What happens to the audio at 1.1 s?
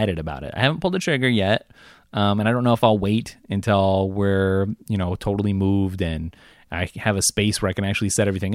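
Nothing goes wrong at 1.1 s; the speech runs on intact through that moment.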